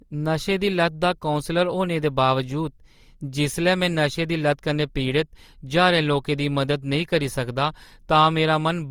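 Throughout, the speech sounds swirly, smeared and hollow, with blurred attacks. This is likely generation loss: around four re-encodes, consistent with 48 kbit/s Opus, compounding quantisation damage.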